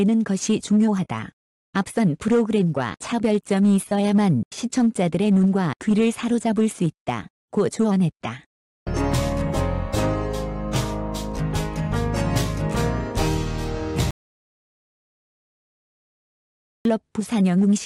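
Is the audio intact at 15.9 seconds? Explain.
No, 15.9 s falls inside an audio dropout to silence from 14.11 to 16.85 s, total silence with no room tone, likely from lost input written as silence.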